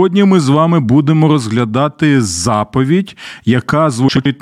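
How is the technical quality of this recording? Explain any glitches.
One glitch stands out, near the end of the speech. From 4.08 to 4.26 s there is a frames-out-of-order fault: two adjacent runs of coded frames were received swapped and decoded as they arrived, so the two 85.3 ms halves of that stretch play in reverse order. Each half holds four frames, which fits a small packetised block. The result is a brief garbled flutter, and no audio is lost.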